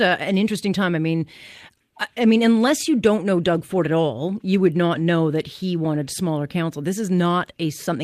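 Listening to the speech here, nothing stood out as a technical fault at any point.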